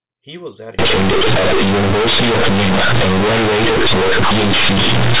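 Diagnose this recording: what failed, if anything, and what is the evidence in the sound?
From 0.79 s to the end, the speech turns into very loud, buzzy distortion, with quiet parts as big as loud ones and heavy noise in the pauses. This is companded audio read as linear at sample-format conversion: mu-law bytes are played as plain 8-bit samples without expansion, so each sign change swings across half the output range.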